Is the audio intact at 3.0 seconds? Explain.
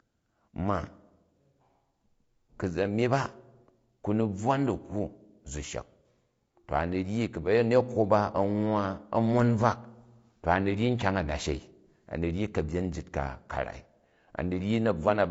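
No. At 3.0 seconds, as throughout the clip, the speech sounds rough and grainy, with a hiss-like texture filling the gaps between the voice's harmonics and a top band that sounds thinned and somewhat synthetic. The likely cause is low-delay AAC compression of the AAC-ELD kind used in video calls, at a rate that fits about 32 kbps. Its very short frames separate pitch harmonics poorly, and at so low a rate too few bits remain to render them cleanly.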